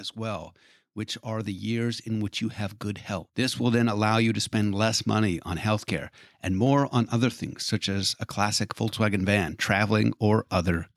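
From about 0.57 s right through to 10.74 s there's a click roughly every 1.02 s, around ten of them, evenly spaced under the speech. That steady rhythm is the giveaway for clock drift buffer slips: the likely cause is two devices running on separate clocks, something like 200 ppm apart, so the buffer between them creeps until a handful of samples gets dropped or doubled and the waveform jumps.

Then between 1.22 s and 3.87 s the whole thing swells up by about 7 dB, speech and background together, over a couple of seconds rather than in a step. That's automatic gain rising. The gain control decided the input was too quiet and ramped its gain up, so everything, noise floor included, comes up as one.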